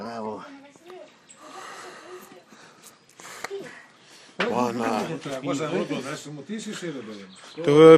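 Throughout the audio, a dull, gurgling, granular quality is plainly audible, likely from MP2 compression at a low bitrate, which fits roughly 80 kbps. Starved of bits, upper sub-bands drop out and flicker. A spectrogram shows a ragged high-frequency ceiling with blocky, patchy bands switching on and off.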